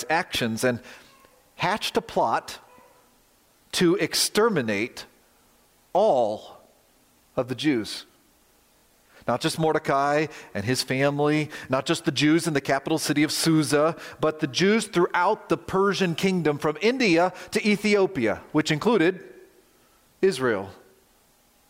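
A Bluetooth stutter occurs from 8.78 to 8.84 s. Packets arrived late or went missing, so the receiver kept replaying its last short buffer, giving a brief buzzing repeat. About 46 ms of audio is skipped, which fits two lost packets, and the sound then resumes further along.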